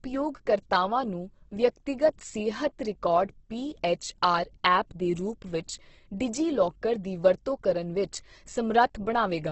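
Throughout the speech, the audio sounds grainy and rough, with a noisy texture where tones should be clean, and nothing above 8.1 kHz. This is heavy damage from likely Opus compression in its CELT music mode, at a bitrate that sounds close to 12 kbps. Short of bits, the encoder keeps each band's energy but fills the detail with folded or noise-like content, giving grit rather than swirl, while the wideband limit removes the upper treble.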